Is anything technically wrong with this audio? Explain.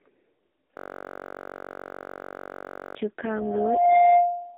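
Yes, there are three problems.

Throughout the clip, the speech sounds buzzy, thin and synthetic, like a poor phone call. Its band runs from about 250 Hz to 3.7 kHz, with nothing above 3.8 kHz. This is the AMR narrowband mobile codec under heavy strain. The speech is rebuilt from a vocal-tract model excited by sparse pulses, and the coarse result points to one of its lowest modes, around 5.15 kbps.

From 0.77 s to 2.95 s, a steady, rough buzz at 46.9 Hz replaces the speech. This is a system hang loop. The machine stalled while the audio hardware replayed the same 21.33 ms piece of buffer roughly a hundred times. That length fits a 1024-sample buffer, and its short length is why the loop sounds like a buzz rather than a stutter.

From 3.35 s to the end, a pure tone at 702 Hz swells over roughly 0.7 s into a squeal that sits a few decibels above the speech. This is loudspeaker feedback squeal. 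The microphone is picking up the loudspeaker it drives, and at 702 Hz the loop gain exceeds one, so the tone builds on itself.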